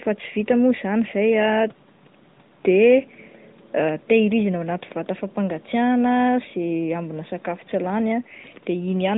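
No technical faults are audible.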